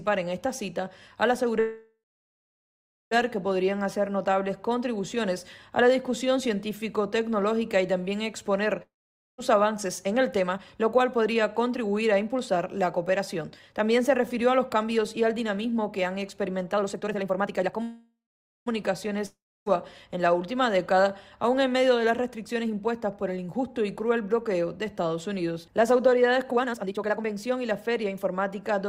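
At 1.59 s there's a call audio freeze running to 3.13 s. The last bit of sound smears on as a fading buzz, then you get about 1.1 s of near silence before things pick up exactly where they left off. Nothing's missing, it's just pushed about 1.5 s later, which points to packets likely getting held up until the jitter buffer ran dry.

At 8.82 s comes a long network dropout lasting until 9.40 s. It starts the same way, a short fading tail and then roughly half a second of quiet, but this time when the audio returns it has jumped ahead. About 0.56 s is gone for good, likely because those packets never arrived at all.

Right after, from 9.54 to 17.81 s, there's a jitter buffer speed-up. The receiver is trimming tiny pitch-period slices over and over to drain a backlog, so everything runs at about 117% speed with the pitch unchanged. It sounds rushed, and roughly a second and a half gets shaved off in total.

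Then the pattern repeats. A second freeze runs from 17.83 to 18.68 s, with about 0.84 s of added delay and half a second of near silence. A second dropout follows from 19.26 to 19.68 s, losing about 0.4 s after a short fade. Two more speed-ups round it out: a mild one at 110% from 22.34 to 23.68 s, and a very obvious one at 138% from 26.51 to 28.62 s, which cuts somewhere around three quarters of a second.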